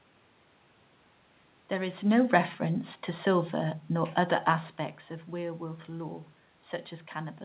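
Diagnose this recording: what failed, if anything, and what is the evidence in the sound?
Nothing failed; no fault is audible anywhere.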